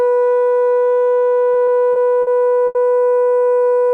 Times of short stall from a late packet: 2.67-2.77

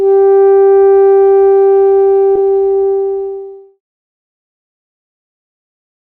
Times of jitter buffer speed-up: 2.45-3.88

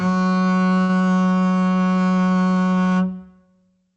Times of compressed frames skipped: none

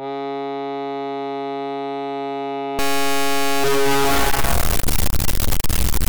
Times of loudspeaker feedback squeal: none

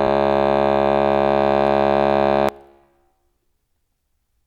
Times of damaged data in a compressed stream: 2.49

